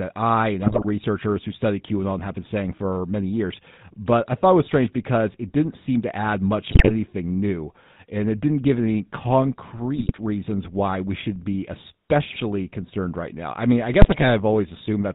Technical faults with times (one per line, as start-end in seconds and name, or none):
0.00-15.14 GSM full-rate codec
0.62-0.85 GSM bit errors
6.72-6.91 GSM bit errors
9.94-10.12 GSM bit errors
12.30-12.42 GSM bit errors
14.02-14.27 GSM bit errors